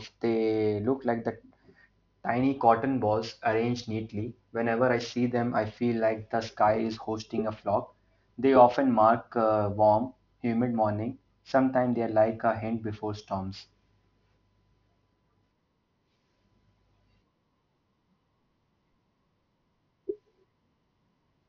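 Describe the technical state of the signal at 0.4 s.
At 0.4 s you're hearing aliasing, and it runs through the whole clip rather than just that moment. The speech sounds like it was dropped to a 12 kHz rate with no anti-alias filter first, so anything above 6 kHz has folded back down into the band as unrelated tones. It sits roughly 30 dB under the speech, but it's enough to make sibilants gritty and metallic, with the spectrum running hard up to 6 kHz.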